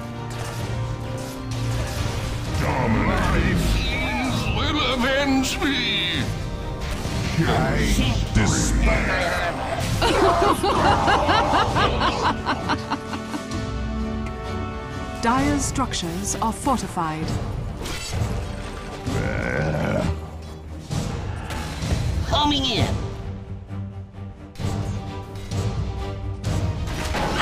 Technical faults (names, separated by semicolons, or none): none